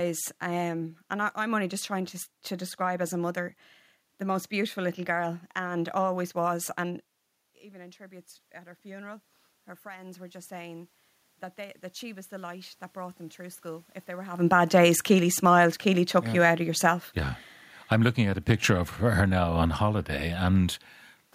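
From 7.54 to 9.31 s, after the talker moves back from the microphone at around 7 s and the input drops by about 20 dB, automatic gain rising sets in. The control slowly lifts its gain by about 5 dB, so the voice and the room noise swell together. A second rise of about 3 dB follows from 9.83 to 10.99 s. On a waveform the envelope widens gradually, and on a spectrogram the background noise floor brightens in step with the speech.

Automatic gain falling appears from 14.37 to 17.08 s, beginning near the talker's move at around 14.5 s. The gain eases down by about 3 dB, and then by about 4 dB from 17.98 to 20.75 s. Each time the sound starts loud and sinks, with the room noise fading alongside it. The waveform envelope narrows steadily across each span, and on a spectrogram both the speech and the noise floor dim together.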